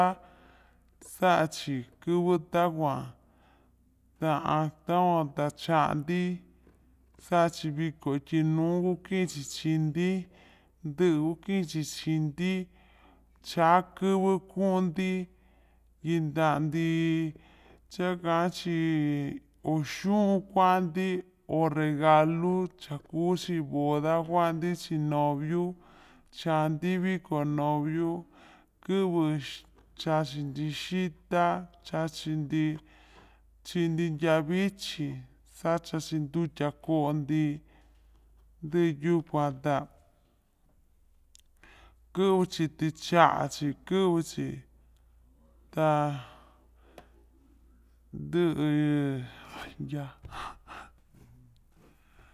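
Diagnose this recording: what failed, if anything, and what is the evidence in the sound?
The playback stage clocked the samples out at the wrong sample rate, with no resampling, so the whole recording runs slow and low from start to finish. The speech plays at 0.726 times its original speed and sits about 5.55 semitones flat, with tempo and pitch falling together by the same ratio. That ratio points to 44.1 kHz material being played back at 32 kHz.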